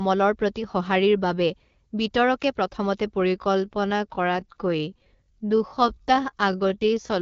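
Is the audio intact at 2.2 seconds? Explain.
Yes, the audio is intact at 2.2 seconds; the speech there comes through cleanly on the AMR wideband (HD Voice) codec at 12.65 kbit/s, with no dropout, glitch or other fault at that moment.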